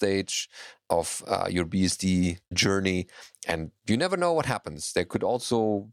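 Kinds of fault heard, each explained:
Nothing stood out on listening to this speech recording.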